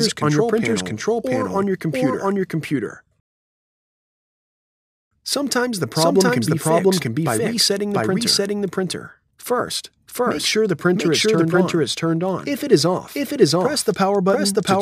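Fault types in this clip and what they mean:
Doubled audio track: The whole clip is heard twice, with a second full-band copy trailing the original by roughly 0.7 s at about the same loudness. Every event is repeated as a distinct, undecayed echo with no room colour, so the sound seems to overlap continuously. The likely cause is the same signal reaching the mix along a second, slower route, or an edit that left two copies offset in time.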